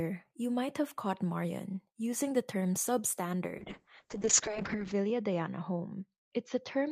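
A speech recording with a call bitrate drop from 3.59 s to the end. The encoder's rate falls from 40 kbps to 6 kbps, bottoming out for about 1.3 s. The audio turns coarse and watery and loses its brightness. On a spectrogram the energy above 8 kHz disappears during the drop, leaving a flat ceiling where the coded band had reached 20 kHz, with smeared, blocky texture below it. The waveform changes little.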